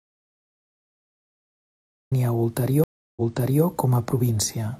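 From the very start until 2.12 s the speech is absent, replaced by a true audio dropout to silence: plain silence with no room tone at all, most likely from a lost input whose recorder kept writing blank samples. Unlike a reconnect, nothing repeats when sound returns.

At 2.84 s a stream reconnect follows: about 0.33 s of silence, then playback resumes roughly 0.47 s earlier than where it stopped, so a short stretch is heard twice. That replayed section, rather than missing material, separates it from a plain dropout. The disturbance settles by 3.64 s.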